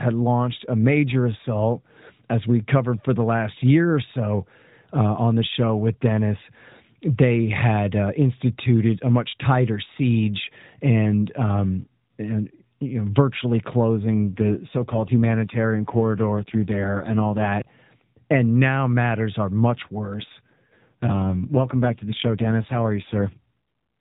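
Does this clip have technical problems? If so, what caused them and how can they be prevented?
Yes. This is narrowband AMR speech, so nothing above 4 kHz, and it has two AMR rate drops, from 13.99 to 17.55 s and from 20.14 to 23.37 s. Each time the voice turns rougher and buzzier, with no gap and no change in band. That sound fits the network pushing the codec from around 12.2 kbps down to around 5.9 kbps and spending the freed bits on error protection over a weak radio link. Better signal at the caller's end would keep the codec at its full rate.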